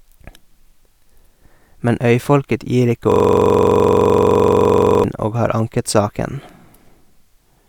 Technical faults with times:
3.12-5.04 system hang loop

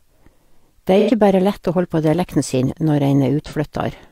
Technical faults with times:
0.99-1.10 AAC frame loss with concealment
3.46-3.54 AAC frame loss with concealment

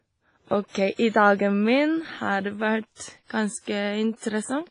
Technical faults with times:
0.00-4.70 WMA compression

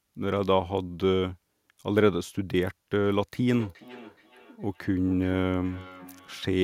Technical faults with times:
3.50-6.64 feedback echo between two devices

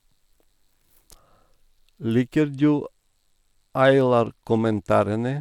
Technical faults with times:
2.40-5.41 Bluetooth SBC bit pool drop

